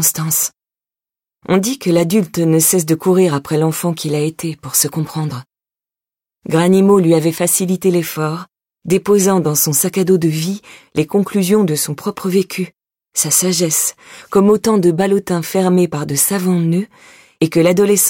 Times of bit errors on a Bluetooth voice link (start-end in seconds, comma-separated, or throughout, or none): none